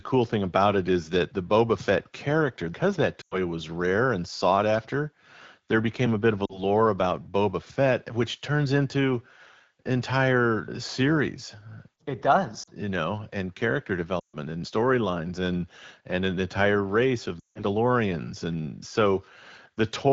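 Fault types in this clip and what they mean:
Lost AMR speech frames: five dropouts where the speech falls to near silence within two frames, from 3.21 to 17.64 s, as the decoder repeats the last good settings with falling gain after corrupted frames.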